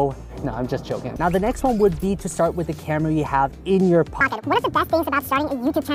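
A section at the wrong speed runs from 4.21 s to the end of the clip at 5.94 s. From that point the audio plays back 1.74 times faster than it was captured, so timing and pitch jump together, with the pitch rising by around ten semitones. The sound turns suddenly high and hurried. The likely cause is that this stretch was played or edited against the wrong clock rate.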